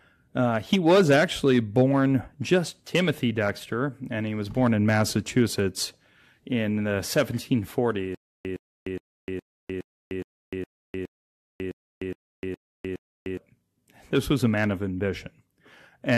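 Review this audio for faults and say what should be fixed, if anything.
From 8.15 to 13.37 s the speech locks into a stutter with silent gaps: a 111 ms fragment repeats 12 times, each followed by about 304 ms of dead silence, pulsing every 415 ms. The likely cause is a stalled stream replaying its last buffer at each retry, so that stretch of speech is lost. Prevent this with deeper buffering and stall handling that resumes cleanly instead of re-sending stale audio.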